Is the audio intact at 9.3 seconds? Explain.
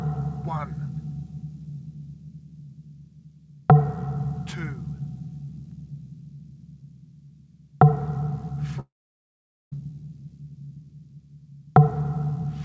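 No, 9.3 s falls inside a long network dropout from 8.80 to 9.74 s. A brief fading buzz gives way to near-silence, likely from lost packets, and that stretch never returns.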